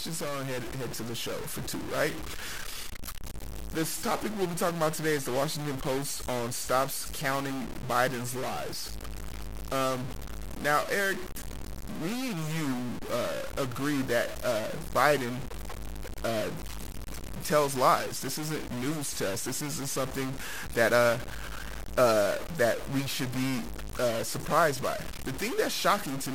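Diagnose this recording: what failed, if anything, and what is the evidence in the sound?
Stuck bit, present throughout the speech. The distortion is harsh and buzzy, riding on the signal for the whole recording, and the pauses between phrases are not silent but filled with a gritty noise floor. That points most likely to the converter or its digital data lines, where one bit is held at a fixed value. Its weight sits around -35 dBFS, so roughly half the samples are pushed off by that step. Small values near zero flip across it, which is why the gaps buzz.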